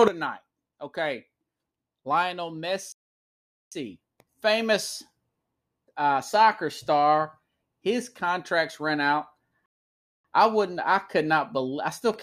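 Speech, interrupted twice by a playback stall: the audio drops to silence from 2.92 to 3.72 s (about 0.79 s) and again from 9.66 to 10.25 s (about 0.59 s), each time resuming afterwards, likely because the player's buffer ran dry or its thread was blocked.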